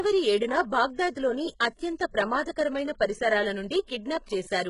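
HE-AAC compression, throughout: nothing above 11 kHz, and s sounds turn gritty and lispy, likely from treble rebuilt by band replication at roughly 12 kbps.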